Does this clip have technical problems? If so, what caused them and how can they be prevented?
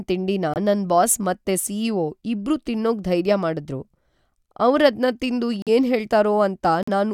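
Yes. These are corrupt frame muted faults: bit errors damaged compressed frames, the decoder rejected them, and the player substituted silence. The speech drops out abruptly at 0.54 to 0.57 s, just before "ನನ್ ಬಾಸ್ ಮತ್ತೆ", a gap that fits a single frame. Longer holes follow at 5.62 to 5.69 s, right after "ಅವ್ರದ್ನ ತಿಂದು", and at 6.83 to 6.89 s, each consistent with two frames. Timing stays intact. Protecting the stream with error-correcting coding or retransmission, and using packet-loss concealment instead of muting, would prevent these gaps.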